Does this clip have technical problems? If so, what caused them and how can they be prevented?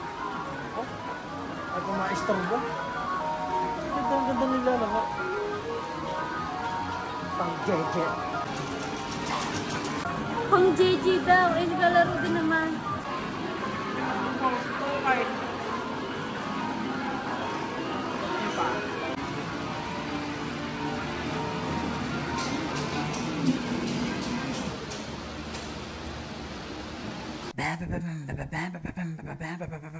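No, the signal shows no technical faults, and its lack of content above 8 kHz matches a normal wideband call path, consistent with G.722 at 64 kbps.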